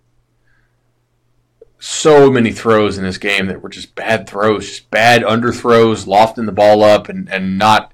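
Hard clipping occurs at 2.06–2.85 s, just before "in this", overdriven by about 8 dB; at 3.27–3.39 s, between "in this" and "that were just", by about 6 dB; at 4.09–4.50 s, after "that were just", by about 6 dB; at 4.95–6.96 s by about 10 dB; and at 7.35–7.77 s by about 10 dB. Each time the speech exceeds what the signal path can carry, so the peaks are sliced flat. The flattened tops add high harmonics, heard as harsh fuzz on loud syllables, strongest in the last two stretches.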